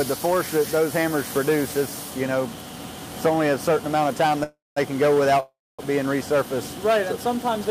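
Packets were likely held up in transit, emptying the jitter buffer in a call audio freeze at 4.43–4.78 s and 5.40–5.81 s. Each time the last sound fades as a buzz or hiss into silence, then resumes where it stopped, nothing lost.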